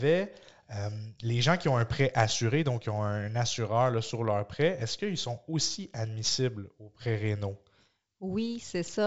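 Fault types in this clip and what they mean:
No faults found.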